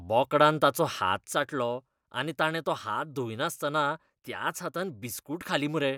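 At 1.33 s the speech drops abruptly in level by about 6 dB and stays lower to the end of the clip. This fits one channel dropping out. The likely cause is one stereo channel being lost. Sound shared by both channels then carries only half its amplitude after the mono sum. Anything present only in the lost channel vanishes. The step is sudden, not a fade. The remaining speech sounds quieter.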